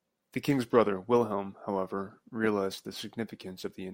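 Nothing stood out on listening to this speech recording.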